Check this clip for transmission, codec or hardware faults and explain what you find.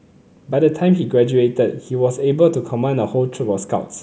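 Nothing found: no audible fault anywhere in the speech.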